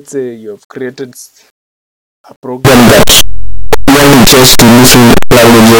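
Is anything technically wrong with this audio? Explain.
Yes. Signed and unsigned mixed up, from 2.65 s to the end: the sound turns abruptly into very loud, harsh distortion, with quiet passages as loud as the rest. The likely cause is 8-bit samples read with the wrong sign convention, flipping the top bit so every zero crossing jumps across the full range.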